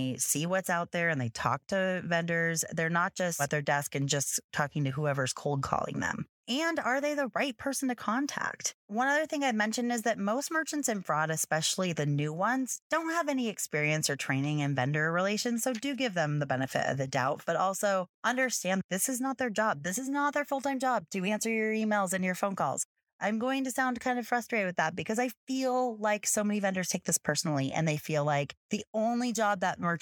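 No technical faults can be heard in the speech.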